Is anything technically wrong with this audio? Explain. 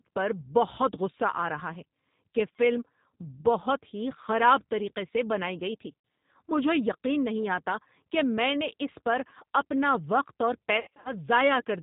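Yes. A G.729 codec, the G.729A variant, is applied throughout. The sound points to an 8 kbit/s speech codec that models speech through a vocal-tract filter, pitch prediction and sparse pulses. It has no content above 4 kHz, and the speech is plainly rough and synthetic.

VoIP packet loss concealed by the speech codec occurs twice. From 6.00 to 6.04 s, 40 ms goes missing, which fits four lost 10 ms frames. From 10.77 to 11.14 s, 210 ms is lost in scattered gaps, the longest lasting 70 ms. The decoder extends the last pitch and filter state with falling gain, producing a fading buzzy tone or coloured noise, and the speech stays weak or distorted briefly after packets resume.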